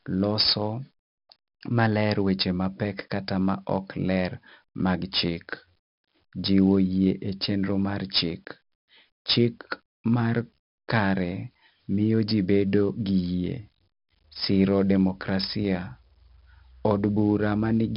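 Throughout the speech, 4-bit ADPCM compression leaves a gritty, level-following hiss and rough attacks; nothing remains above 5.3 kHz, which fits a rate near 44 kbps. At 6.45 s a single sharp click is likely from dropped samples, a handful missing so the waveform jumps abruptly.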